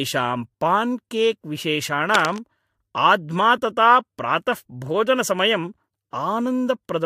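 From 2.14 to 2.39 s, cable scratch noise scratches across the speech, likely a worn connector shifting its contact, showing as dense, ragged broadband smears roughly ten decibels below the speech.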